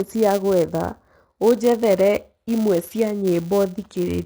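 From 0 to 1.53 s the speech sounds hollow and phasey, with a notch near 3 kHz. This is channel delay (comb filtering): one channel lags by a fraction of a millisecond before the mono sum.

Throughout, sibilants and upper detail sound gritty and metallic. The likely cause is HE-AAC compression at a low bitrate, around 24 kbps, with replicated treble that does not match the original.

Also throughout, a steady 200 Hz buzz rides on the speech and follows its level. This comes from a filter restarted on every block, with a small transient at the start of each one.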